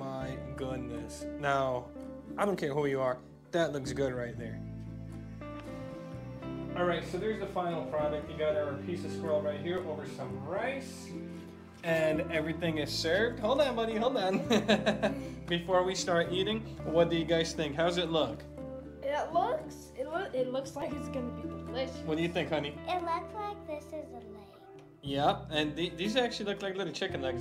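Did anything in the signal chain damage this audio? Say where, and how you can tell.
Yes. The damage is at the driver or buffer stage: an underrun with held sample at 9.77 s and again at 20.82 s. The output buffer ran empty, and the converter held its last value, so the waveform goes flat for 1.97 ms and then 1.45 ms. The second gap fits a 64-sample dropout. About 2 ms and 1.5 ms of audio are lost.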